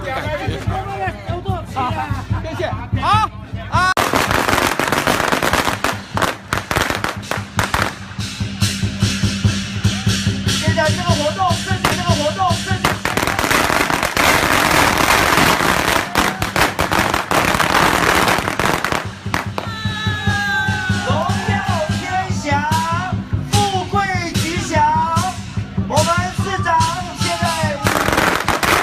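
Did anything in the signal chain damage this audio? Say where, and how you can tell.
Yes, there's a stream segment repeated, and it sits in the network and playback stage. At about 11.91 s there's a small blip where the audio jumps back, and then a full second of material plays over again until 12.91 s, so the clip runs a second longer than it should. That's the player fetching or queuing the same chunk twice and just playing it out again, not a fault in the recording itself.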